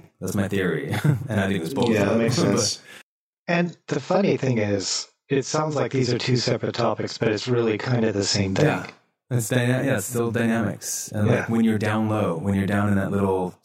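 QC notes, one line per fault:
Throughout: channel delay (doubling). One channel of the speech runs 40 ms behind the other, and the two are summed to mono, so every syllable arrives twice at equal level, heard as a tight doubled, slapback quality rather than a clean single voice.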